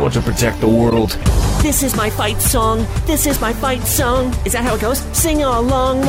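At 0.90 s a corrupt frame is decoded, lasting until 0.98 s. Bits inside the compressed data were damaged, yet the decoder played the frames anyway. Misread codes and wrong gains put energy at frequencies where none belongs. The result is a short glitch, a chirp, squeak, blip or burst of noise. It is loud, peaking at about -5 dBFS. Its length of roughly 80 ms fits around three damaged frames in a row.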